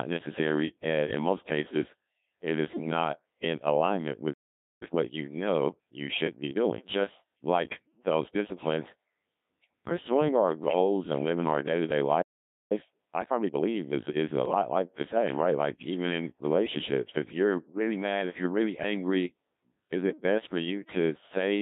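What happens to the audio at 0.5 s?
At 0.5 s you're hearing the Codec 2 vocoder, which runs the whole clip: speech rebuilt from pitch and envelope as sine waves, so it comes out buzzy and robotic, squeezed to about 150 Hz–3.7 kHz at what sounds like roughly 1.3 kbit/s.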